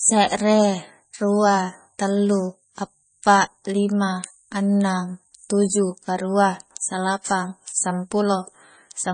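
From start to finish the speech carries heavy damage consistent with MP3 compression, the likely cause. Nothing is present above 9.4 kHz, where the encoder has cut the treble to save bits, and the damage level points to a very low bitrate, on the order of 26 kbps. With so few bits, weak spectral components drop in and out between frames, giving the speech a watery, swirling texture, with sibilants turning metallic and consonant onsets smeared.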